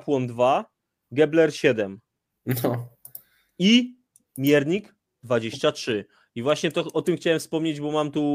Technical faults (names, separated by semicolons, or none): none